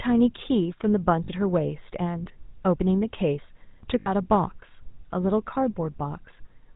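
A buzzy, gravelly roughness runs through the whole speech clip, with a dull top end where nothing above 4 kHz survives. This is the GSM full-rate codec at work, and the damage is plainly audible. The codec rebuilds the vocal tract from a filter model and excites it with a sparse train of regularly spaced pulses, keeping only every third excitation sample. That coarse excitation causes the grainy buzz, and the character fits the 13 kbps full-rate coder.

At 1.24 s a brief rough, metallic ring replaces the speech for about 40 ms, ending at 1.29 s. A longer version of the same ring runs from 4.0 s to 4.1 s, lasting about 60 ms. These are lost GSM frames. When frames go missing, the decoder keeps reusing the parameters of the last good frame at a falling level. The held filter and pulse settings produce that static, tinny ring in place of real speech.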